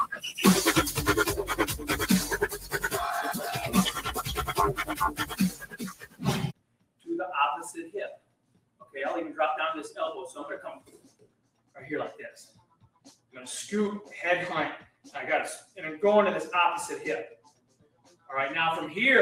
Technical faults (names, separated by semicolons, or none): noise suppressor applied to music or sounds; sound cut by the noise suppressor